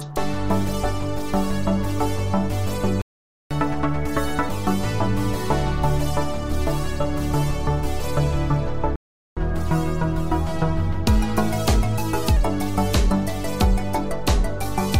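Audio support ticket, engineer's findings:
Playback stall at 3.02 to 3.51 s, about 0.49 s of silence, then at 8.96 to 9.37 s, about 0.41 s. Audio cuts out mid-flow. Likely cause: player buffer underrun or blocked playback thread. Output resumes once data arrives.

Catch-up at higher speed right after each stall. 3.51 to 4.49 s at 1.5x, pitch up around seven semitones. 9.37 to 12.37 s at 1.1x, pitch up under two semitones, subtler. Player resampling its backlog to recover lost time, then returning to normal rate.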